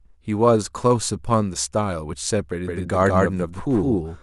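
At 2.67 s a doubled audio track appears and runs to the end of the speech. A second copy of the same audio sits roughly 150 ms behind the first. It is about as loud as the original. The copy is full-band and dry, with no decay or room sound. It switches in abruptly. The result is a hard, stuttering echo on every syllable. The likely cause is a second, slower capture path mixed in with the first.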